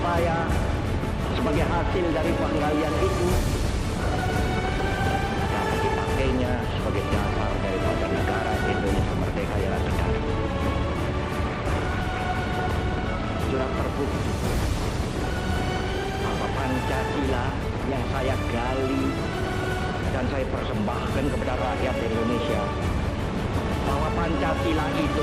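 A few samples likely went missing from the stream at 2.92, 8.21 and 11.85 s, each gap a fraction of a millisecond, consistent with dropped samples. The waveform jumps straight to a later value, so each spot gives a single sharp click with no audible loss of sound.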